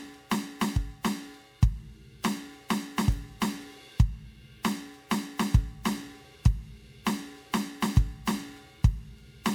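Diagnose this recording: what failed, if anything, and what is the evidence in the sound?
Throughout the music the sound is swirly and hollow, with smeared, blurred attacks beyond what a single 128 kbit/s MP3 pass would produce. That is likely generation loss at the codec stage: around seven MP3 decode-and-re-encode passes, each quantising on a shifted frame grid, stacking noise and spectral holes.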